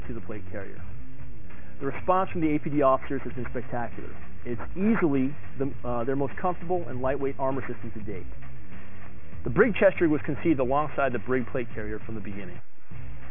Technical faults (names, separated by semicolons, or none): aliasing